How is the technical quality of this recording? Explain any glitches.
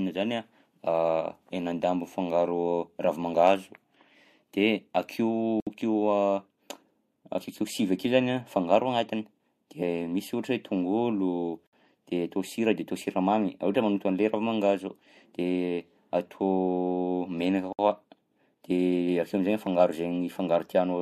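The speech is interrupted by three brief dropouts, spaced about 6 s apart: 5.60 to 5.67 s (67 ms), 11.67 to 11.73 s (60 ms), and 17.73 to 17.79 s (60 ms). Each is a gap at a join of encoded pieces. The audio was encoded in separate 6 s segments and concatenated untrimmed, so every encoder's start-up delay and final-frame padding remain. The result is a short hole of silence with smeared edges, after which the speech resumes exactly where it stopped.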